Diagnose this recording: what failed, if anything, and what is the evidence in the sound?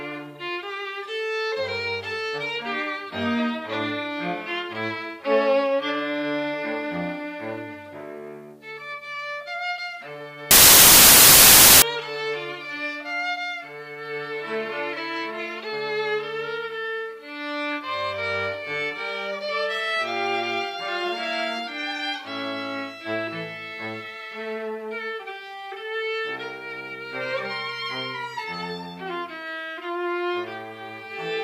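A wrong sample width fault in sample-format conversion runs from 10.51 to 11.82 s: noise with the original sound buried in it, playing 1.33 times fast and correspondingly higher in pitch. That ratio fits packed 24-bit samples read as 32-bit, so bytes straddle sample boundaries.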